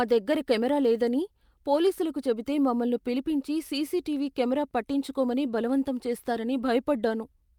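Speech, with nothing technically wrong in it at any point.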